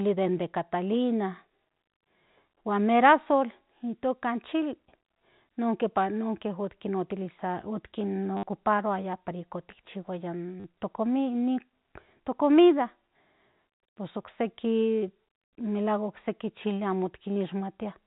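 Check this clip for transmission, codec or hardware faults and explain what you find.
Three brief dropouts with the last packet repeated occur in this telephone-band speech, which sits within the 4 kHz limit of G.711 mu-law coding.

Packet loss with last packet repeated: at 8.37 s (60 ms), 10.6 s (40 ms) and 17.34 s (30 ms), the receiver replays the last audio chunk. The repeats seldom line up with the pitch. The result is a short robotic buzz near 100 Hz, which fits 10 ms packets. On a waveform it appears as identical repeating segments with jumps at each seam. A spectrogram shows evenly spaced vertical lines with harmonics that stay flat.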